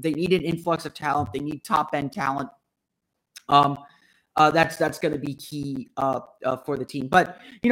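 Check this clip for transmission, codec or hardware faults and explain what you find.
The clip has one hardware fault, periodic USB or driver dropouts, running from 0.14 s to 7.64 s. Every 0.125 s, eight times a second, the audio stream stalls and roughly 10 ms of speech is replaced by silence, about seventy gaps in all. The even spacing points to a background task on the host repeatedly blocking the USB bus or the audio driver. Because the gaps cut into the speech, each one is heard as a sharp tick, forming a steady rapid clicking beneath the speech.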